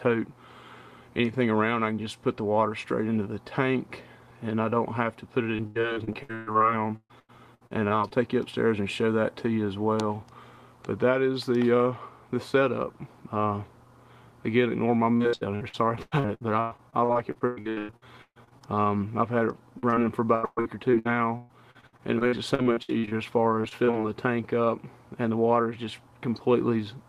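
Repeated packet loss (robotic sound) first appears from 5.55 to 8.12 s. Packets went missing again and again, and each hole was filled by extending the preceding sound. About a third of that stretch is patched, and the longest gap is 133 ms. The sound turns choppy, with pieces dropping out. The same fault returns from 15.16 to 18.63 s, where about 38% is patched and the longest gap is 132 ms.

Short concealed packet loss follows at 19.79 to 19.95 s, where about 40 ms never arrived in time and was rebuilt by continuing the preceding sound, stretching it slightly. A second hole of about 20 ms falls inside it, at 19.90 to 19.94 s. Each patch blends back into the real signal, and together they are heard as a brief smear or wobble.

Repeated packet loss resumes from 20.35 to 23.13 s, with about 32% patched and a longest gap of 121 ms. It returns once more from 23.61 to 23.95 s, a shorter burst of small gaps of up to 24 ms.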